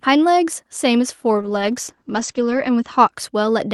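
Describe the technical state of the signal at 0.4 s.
At 0.4 s the signal is intact, with no audible fault at that point.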